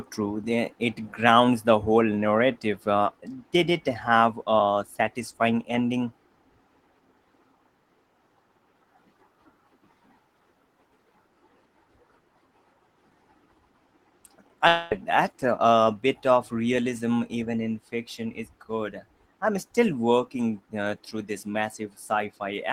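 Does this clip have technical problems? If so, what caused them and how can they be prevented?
Yes. From 14.67 to 14.94 s the speech gives way to a buzzy, smeared continuation of the preceding sound that lasts about a quarter of a second and never drops to silence. It then resumes with roughly 240 ms skipped. This is likely a long network dropout. That length and the synthetic fill distinguish it from a brief packet-loss click or a stutter. A larger jitter buffer and forward error correction on a steadier connection would help prevent it.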